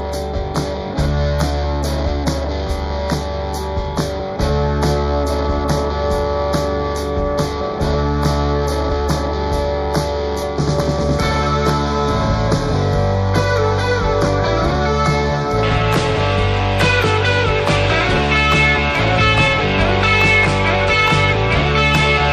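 Throughout, the sound is watery and swirly with dulled treble, likely from MP3 compression at a low bitrate; a spectrogram shows a hard high-frequency ceiling and flickering patches. From 0.0 to 15.6 s, channel delay (comb filtering) makes everything hollow and phasey: one channel lags by a fraction of a millisecond, giving a fixed notch around 3 kHz. At 18.17 s, a repeated buffer replays a 5.8 ms piece once, consistent with a 256-sample buffer. It is heard as a click or brief buzz, with a hard join visible in the waveform.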